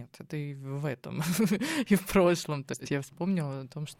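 At 2.74 s a brief garbled flutter breaks into the speech, lasting until about 2.92 s. This is frames out of order: two adjacent runs of frames, about three each and handled in 60 ms blocks, were decoded in swapped sequence, so the stretch plays its second half before its first. Nothing is lost or added. The timeline only jumps back and forth at those three seams.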